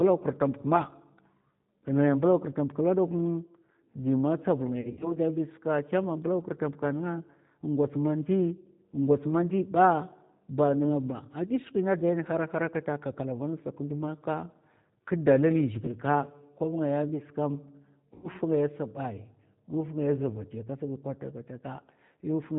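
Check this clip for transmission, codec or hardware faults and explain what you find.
Two faults are present: low-bitrate speech coding across the whole clip, and three bursts of packet loss concealed by the decoder.

G.729 codec, throughout: the speech is rebuilt from a filter model, pitch predictor and sparse pulses, which fits an 8 kbit/s G.729A stream. The coding damage is plainly audible: everything above 4 kHz is gone, leaving the speech rough, synthetic and band-limited.

VoIP packet loss concealed by the speech codec, at 4.81–5.17 s, 15.86–15.92 s (just after "kndu maka kdalali") and 18.14–18.29 s: the decoder filled the missing frames by extending its last pitch and filter with falling gain. In the first burst, 120 ms went missing, scattered over 200 ms with runs up to 60 ms. The second lost 20 ms, and the third about 100 ms. Each gap smears into a fading buzzy tone or coloured noise, and the speech stays weak briefly afterwards.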